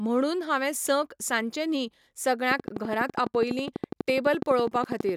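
From 2.51 to 5.10 s, a train of clicks ticks through the speech at 12 per second, evenly spaced, about thirty clicks. They stand well above the voice. Interference from nearby equipment is the likely cause.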